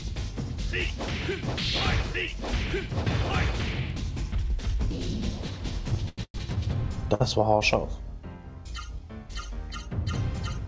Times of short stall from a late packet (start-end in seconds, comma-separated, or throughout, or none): 7.14-7.22